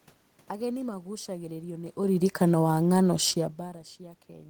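From 2.01 to 3.56 s, automatic gain falling: the control lowers gain by about 4 dB, so speech and room noise sink together.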